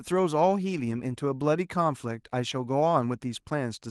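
No technical faults can be heard in this speech recording. The Opus voice compression, working in hybrid mode at 24 kbps with the full bandwidth kept, leaves only light coding traces on the sound.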